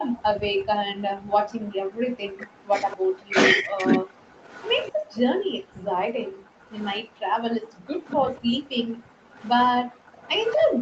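From 0.00 to 0.15 s a faint delayed copy of the speech sits about 15 dB under the direct sound, 240 ms behind it. This is an echo leak, likely from a far end on loudspeaker whose echo canceller let part of its microphone pickup return. On a spectrogram it shows as a weaker, time-shifted ghost of the speech harmonics. Like everything in the clip, that ghost stops at 8 kHz because of the call path's bandwidth.

Between 0.42 and 1.40 s the background is gated by the echo canceller. While the loudspeaker plays, the canceller pulls the microphone down, and for roughly a second in total the room tone drops by as much as 40 dB. The waveform's noise floor collapses to near-flat, and the spectrogram shows a dark hole in the background wash before it fills back in.

From 1.69 to 4.07 s comes speech suppressed in double talk. With both sides talking, the canceller likely turns the near talker down along with the echo. 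For about a second and a half in total the voice dips by roughly 40 dB, losing pieces. On the waveform the envelope is notched and chopped, and on the spectrogram the harmonics thin out or break off mid-stretch.

The echo leak returns from 2.88 to 5.17 s, again 240 ms late and about 20 dB down, overlapping the suppressed stretch.

From 4.35 s to the end the background stays gated, with drops of up to 40 dB.

Brief double-talk cuts follow at 5.86–5.90 s, about 40 dB deep, and at 8.12–8.32 s, about 30 dB deep. Each appears as a sharp gap in the speech envelope.

From 6.71 to 10.57 s the 240 ms echo trails the speech at about 25 dB below it. It is faint, but it still shows as a displaced smear of harmonics.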